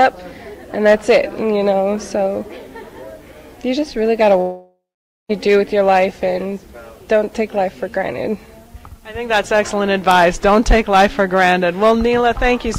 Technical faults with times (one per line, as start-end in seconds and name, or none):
4.41-5.31 long network dropout